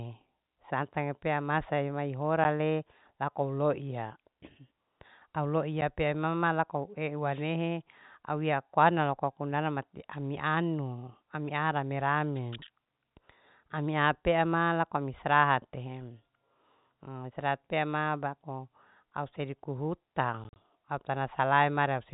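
At 2.44 s and again at 5.81 s the speech drops out for an instant, with a hard edge on each side. This is packet loss filled with silence: each gap fits one missing 10 ms packet, replaced by nothing rather than concealed. From 7.31 to 7.44 s and from 12.35 to 12.40 s a short swish of static is heard. These are wireless microphone noise hits, where the FM radio link faded and receiver noise briefly rose over the signal. Between 20.44 and 20.56 s the speech stutters through several holes, the same packet loss filled with silence on a larger scale. About 70 ms goes missing across those 120 ms, in runs of up to 40 ms. Throughout, nothing passes above 4 kHz, as expected of the G.711 telephone coding.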